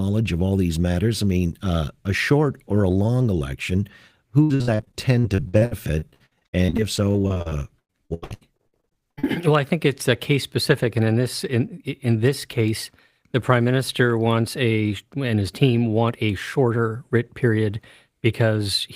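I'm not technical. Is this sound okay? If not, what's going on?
No. Repeated packet loss (robotic sound) from 4.43 to 9.27 s: dozens of brief dropouts, each patched by stretching the previous sound, so it sounds choppy, with pieces missing.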